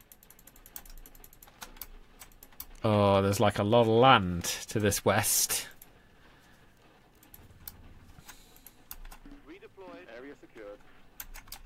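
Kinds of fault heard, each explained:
No technical faults are audible in this clip.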